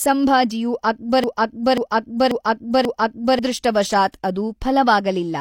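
From 1.24 s to 3.39 s the speech falls into a broken-record loop. A fragment of 538 ms plays four times back to back, identical on each pass. The player or stream likely stalled and kept resending its last buffered piece, so the audio due in that span is lost.

At 4.12 s a sharp attack is preceded by pre-echo, a short hiss spreading 20 ms ahead of it. A transform codec distributed quantisation noise sized for the loud onset across the whole block. That noise filled the quiet moment before the onset and smeared the attack.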